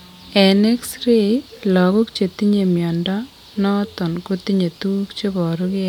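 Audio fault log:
No faults turn up anywhere in the speech. Nothing in the recording calls for an entry in this log.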